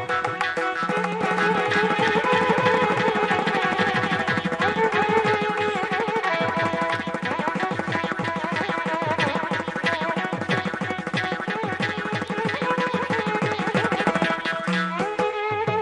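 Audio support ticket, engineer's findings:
Doubled audio track, 1.21–5.29 s. Second full-band copy trails by about 300 ms at roughly equal level, with no decay or room colour. Cuts in and out abruptly. Likely cause: a slower second capture path or out-of-step duplicate in the edit.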